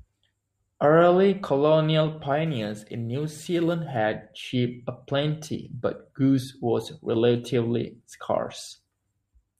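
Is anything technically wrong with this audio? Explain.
Yes. From about 2.46 to 3.96 s there's crude rate conversion: the speech sounds like it was taken from 48 kHz down to 44.1 kHz by just grabbing the nearest sample, no filtering. That leaves a gritty, inharmonic fizz riding the louder, brighter sounds, roughly 30 dB down.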